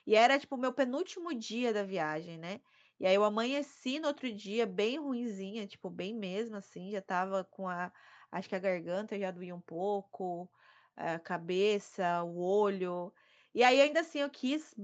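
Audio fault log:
No fault to log for this audio.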